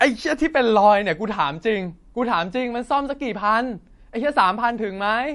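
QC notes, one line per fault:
Throughout, MP3 compression: the speech sounds plainly watery and swirly, with nothing above 11.2 kHz. Likely an encoder starved of bits, consistent with a low bitrate near 49 kbps, cutting the treble and dropping weak frequency lines frame to frame.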